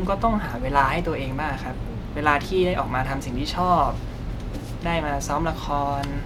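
Listening closely to the speech here, nothing stood out as a technical problem at any point.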